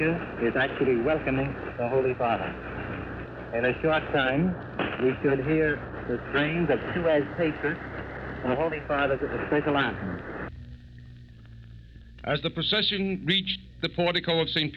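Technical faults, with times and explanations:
6.77–8.84 s and 11.31–12.15 s, drift correction step: the sound jumps about 5.7% faster and roughly a semitone sharp, snaps back, then later drops 5.7% slower and a semitone flat, likely from clock-matching rate steps; unlike wow or flutter, each shift is abrupt and holds steady.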